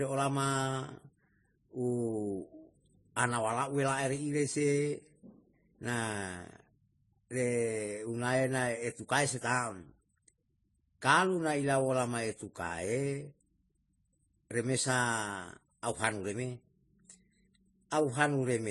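Throughout the speech, nothing remains above 11.5 kHz, and two layers of coding damage are heard together: the second codec's artefacts sit on top of the first's. This is likely transcoding between lossy codecs, consistent with low-bitrate MP3 re-encoded as low-bitrate AAC-LC.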